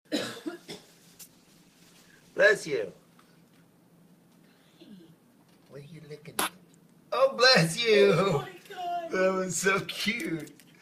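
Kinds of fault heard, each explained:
Call bitrate drop: from 0.61 s the encoder gets starved of bits as the call's bandwidth estimate falls, so the sound turns coarse and muffled with the top end trimmed. That fits a dip from 48 kbps to around 17 kbps, recovering by 3.09 s.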